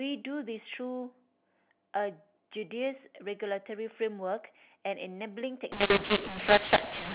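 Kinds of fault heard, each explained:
mu-law and A-law mixed up: from 5.72 s to the end, levels scramble and pauses fill with noise, pointing to mu-law being decoded as A-law, unlike clipping, which only flattens peaks.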